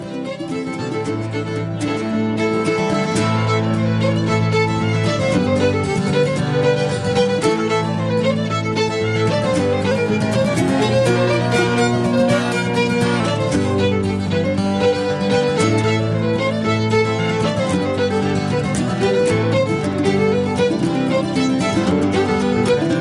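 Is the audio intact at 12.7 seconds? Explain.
No. From 9.91 to 13.2 s a wrong sample rate plays the sound about 1.09 times fast and roughly 1.5 semitones high, fitting 22 kHz audio played at 24 kHz. A spectrogram shows harmonics shifted upward and events squeezed in time.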